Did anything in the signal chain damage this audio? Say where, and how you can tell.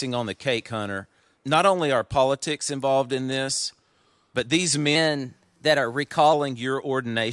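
Yes. From 4.95 s to 6.33 s, just after "but these", the speech turns higher and hurried, running about 1.09 times fast and about 1.5 semitones sharp, with pitch and tempo shifting together. That linked change points to a wrong sample rate at the playback stage: the samples were clocked out faster than they were captured, with no rate conversion. A ratio of 1.09 fits audio recorded at 22 kHz being played at 24 kHz.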